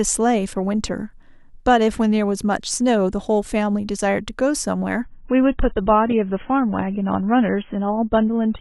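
Adaptive stream at a lower bitrate from 5.04 s to the end of this speech recording: the quality drops abruptly with no gap, treble vanishes above 3.8 kHz and codec artefacts rise, pointing to a switch from roughly 96 to 16 kbit/s AAC after the connection slowed.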